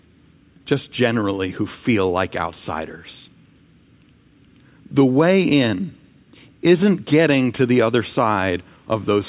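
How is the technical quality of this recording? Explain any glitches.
Nothing stood out on listening to the recording, so there are no glitches to explain.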